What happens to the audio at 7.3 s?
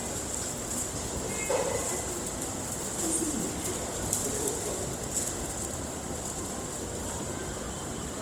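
At 7.3 s the audio is caught in Opus compression that runs through the whole clip, likely from an encoder in its music (CELT) mode starved at a rate that fits roughly 24 kbps. With too few bits, the codec keeps each band's energy but refills detail by folding lower bands or injecting noise, so the sounds there turn grainy and rough. The bandwidth stays wide, reaching about 20.4 kHz.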